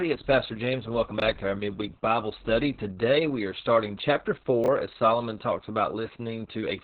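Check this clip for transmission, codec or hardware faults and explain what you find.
Two faults are present: heavy low-bitrate Opus voice compression across the whole clip, and two brief chunks out of order.

Opus voice compression, throughout: the SILK coder runs narrowband with nothing above 4.5 kHz and coarse excitation, consistent with roughly 6 kbps. The speech sounds muffled, hoarse and faintly robotic.

Chunks out of order, at 1.18 to 1.22 s and 4.64 to 4.68 s: a 20 ms chunk plays one chunk late, swapped with its neighbour. Each leaves a short jumbled blip.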